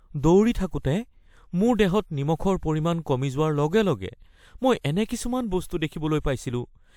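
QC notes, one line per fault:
Nothing stood out on listening to this speech clip.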